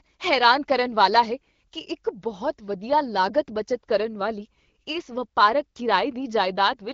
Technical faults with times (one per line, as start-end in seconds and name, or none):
none